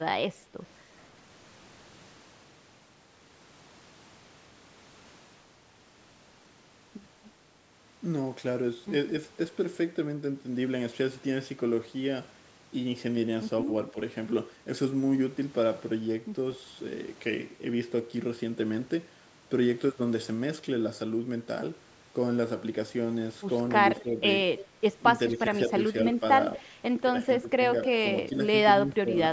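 Speech suppressed in double talk first appears at 13.65 to 13.95 s as a brief dip of about 5 dB. It returns at 23.99 to 24.07 s, 25.35 to 26.65 s, 27.42 to 27.63 s and 28.28 to 28.32 s with drops of about 10 dB, and deepest at 28.87 to 29.14 s, about 15 dB. Each time the speech thins or sinks for short stretches, likely because an echo canceller, unable to tell the local talker from the far side's loudspeaker sound while both talked, turned everything down.

Echo leak overlaps this, running from 23.99 to 24.67 s and again at 27.84 to 27.88 s. A faint delayed copy of the speech trails about 230 ms behind, roughly 20 dB below the speech at first and about 15 dB below in the later scrap. This is likely residual loudspeaker pickup that the far end's canceller failed to remove and sent back. The call's band-limiting, with nothing above 8 kHz, is ordinary microphone processing.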